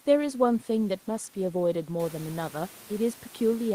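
No technical faults are audible.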